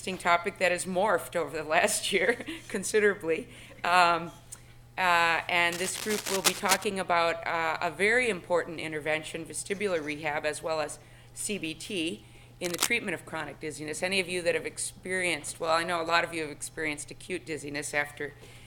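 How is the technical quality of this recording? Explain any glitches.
Two brief glitches. Cable scratch noise: a worn cable or connector, likely shifting, fluctuates in contact resistance, adding rough scratching bursts from 5.71 to 6.84 s, slightly below the sound, and from 12.64 to 12.89 s, roughly as loud as it.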